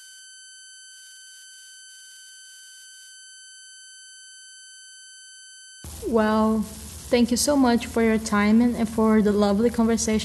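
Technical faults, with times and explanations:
Throughout, converter idle tones: the delta-sigma converter runs without dither, so low-level input locks it into repeating bit patterns. These produce tones around 1.5 kHz in pauses and grainy noise under quiet speech, about 24 dB below the signal.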